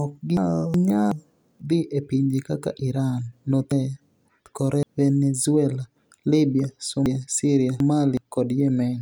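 Between 0.37 and 1.12 s, 3.72 and 4.83 s, and 7.06 and 8.17 s, the speech turns briefly jumbled. These are chunks out of order. A block of about 0.37 s plays late: one chunk late first, then two. Nothing is lost, but each misplaced block leaves hard joins.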